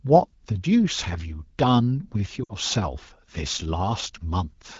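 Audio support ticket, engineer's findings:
Short drop to near silence, 2.43–2.53 s. Lost AMR speech frames: about 60 ms of corrupted radio frames, which fits three 20 ms frames. The AMR-WB decoder concealed them by repeating the last good pitch and vocal tract settings at decaying gain.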